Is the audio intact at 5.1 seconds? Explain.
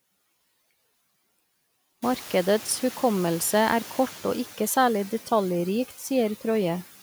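No. Noise suppressor artifacts run through the whole clip, so 5.1 s is affected. The suppressor pulls steady-noise bands down by about 14 dB frame by frame. Because this works band by band rather than muting the whole signal like a gate, the noise dips between phrases and swells back under speech. The room noise it acts on, which rose around 2 s, is part of the recording.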